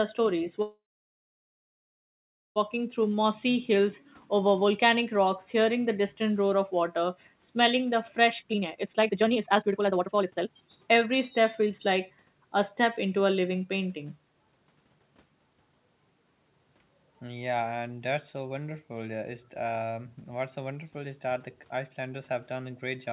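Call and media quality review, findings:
Call audio freeze, 0.62–2.58 s: speech halts for about 1.9 s. A short fading buzz, then about 1.7 s of silence, and speech resumes where it stopped with nothing lost. Likely the jitter buffer ran dry while packets were held up. On the waveform, a decaying tail into a flat line. On the spectrogram, a blank column.

Jitter buffer slow-down, 3.09–3.28 s: speech drawn out to 82% speed at unchanged pitch, about 43 ms added. The jitter buffer repeated single pitch periods to rebuild its reserve. On the waveform, near-identical cycles repeated back to back. On the spectrogram, harmonics stretched horizontally without shifting in frequency.

Jitter buffer speed-up, 8.3–12.11 s: speech hurried to about 151% speed, pitch unchanged, roughly 2 s cut in total. The jitter buffer trimmed pitch-period-sized pieces repeatedly to shed excess delay. On the spectrogram, compressed syllables with harmonics unshifted, set against a band that stops at 4 kHz throughout.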